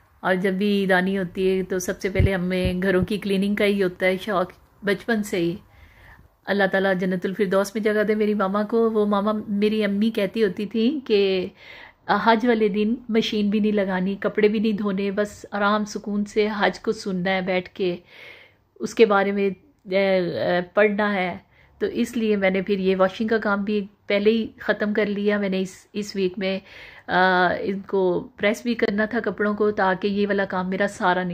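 From 10.64 s onward, channel delay causes comb filtering: one side lags a couple of samples, and the mono sum cancels near 10 kHz. It sounds dulled, with a steady notch band across the spectrogram.

At 28.85 to 28.90 s, a corrupt frame decoded, roughly two frames, produces a brief glitch peaking around -10 dBFS. The waveform spikes, and the spectrogram shows a brief smear of misplaced energy.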